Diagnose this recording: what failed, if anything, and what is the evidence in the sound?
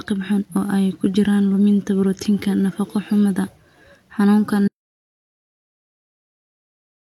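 The speech cuts off at 4.68 s and never comes back: an audio dropout to silence running to the end. The gap is plain silence with no room tone, so the input was likely lost upstream, through a pulled cable or a dropped device link, while the recorder kept writing.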